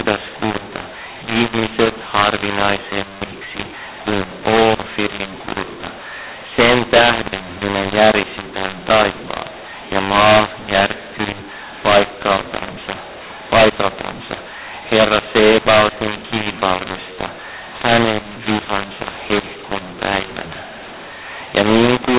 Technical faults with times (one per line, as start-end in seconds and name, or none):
0.00-22.19 mu-law and A-law mixed up